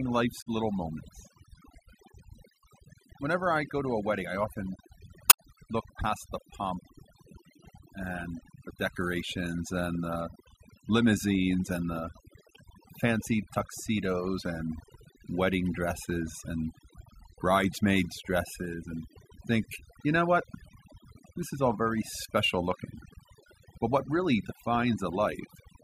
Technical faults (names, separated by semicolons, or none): overdone noise removal; damaged data in a compressed stream